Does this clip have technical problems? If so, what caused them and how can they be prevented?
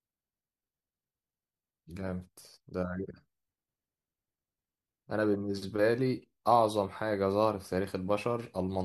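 No, nothing stood out as a technical problem on listening, so there is no cause to trace or prevent.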